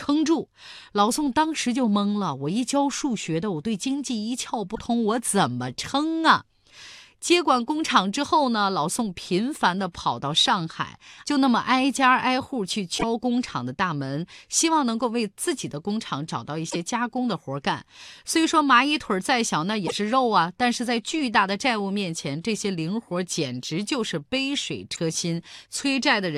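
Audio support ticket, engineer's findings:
Damaged data in compressed stream at 4.72–4.79, 12.95–13.04, 16.67–16.76, 19.84–19.93 and 24.93–24.98 s. Brief chirps or blips, each under 0.1 s, in the speech. Corrupt frames are misread or rejected, the decoder loses sync, then resyncs on the next frame header.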